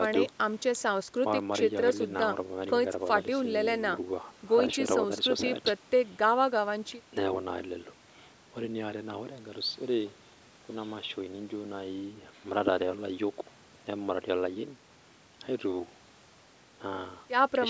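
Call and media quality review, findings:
No faults found in review.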